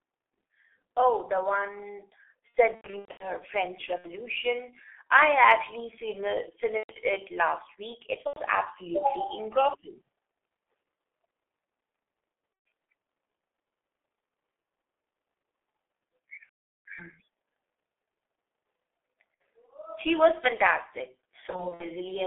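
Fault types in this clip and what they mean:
G.723.1 codec: The speech sounds muffled and hoarse throughout, with smeared consonants and a thin, boxy tone confined to roughly 300 Hz to 3.5 kHz. This comes from a low-rate internet-telephony codec running at about 6.3 kbit/s. It describes the voice in 30 ms frames using a slowly updated vocal model, so fine detail and quick articulation are lost, and everything above the telephone band is gone.
VoIP packet loss concealed by the speech codec: Eight times the voice stretches into a buzzy, fading tone or coloured hiss, then stays weak and distorted briefly afterwards. The worst spells are just after "the one" around 2.49 to 3.25 s, with about 390 ms missing, and near 16.4 s, with about 420 ms missing. Lost packets force the decoder to extrapolate from its last pitch and filter while lowering the gain, and it takes time to recover.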